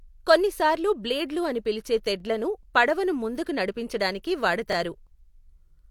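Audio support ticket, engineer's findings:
Overlapping chunks. Speech clip. Short stutter at 2.20–2.23 s, between "కొన్నిసార్లు బ్లేడ్లు అని పిలిచే" and "పడవను ముందుకి". Same stutter at 4.73–4.75 s. About 23 ms of audio heard twice at each join. Joins spaced 2.5 s apart. Probable component: chunked processing or streaming stage. Mechanism: each 2.5 s chunk starts before the previous one ends, so the overlap replays and clicks at every boundary.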